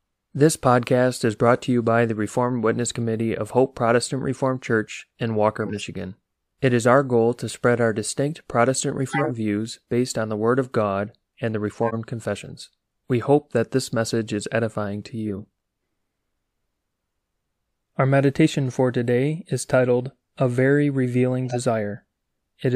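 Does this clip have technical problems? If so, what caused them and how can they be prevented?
Yes. The speech has six short bursts of corrupt frame decoded, at 5.65–5.79 s, 9.09–9.31 s, 11.83–11.94 s, 15.28–15.44 s, 18.71 s and 21.46–21.57 s. Each is a chirp or blip of noise lasting a few codec frames. The loudest are near 9.1 and 11.8 s, and the faintest is at 18.71 s. Flipped bits in the compressed stream gave the decoder wrong gains and codes. It played those frames anyway, which put energy at the wrong frequencies. Adding checksums or forward error correction to the transport would let damaged frames be detected and concealed rather than decoded.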